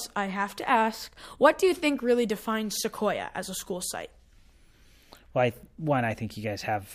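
Speech with no audible faults.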